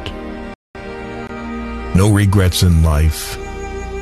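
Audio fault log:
0.54–0.75 s, playback stall: the player likely ran short of data or had its output thread blocked, so nothing reached the output for about 210 ms. The sound halts abruptly mid-flow, sits in silence, then resumes.
1.27–1.29 s, gap at a join of encoded pieces: two separately encoded segments were spliced without trimming the encoder's start delay and end padding, leaving a 21.5 ms hole in continuous sound. The edges are smeared by the codec, and the sound then carries on from where it stopped.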